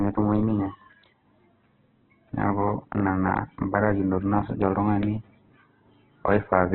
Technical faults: Opus compression

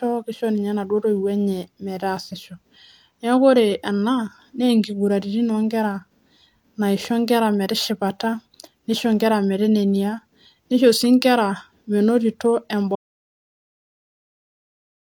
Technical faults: audio dropout to silence

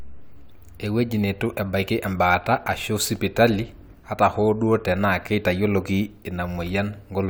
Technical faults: none

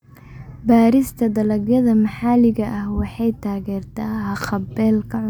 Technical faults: none

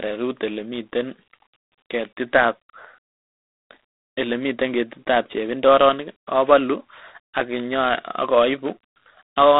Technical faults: G.726 ADPCM

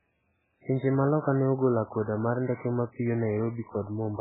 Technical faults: MP3 compression

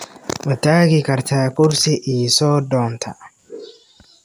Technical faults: none

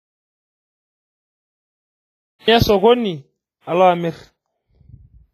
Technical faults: WMA compression; audio dropout to silence

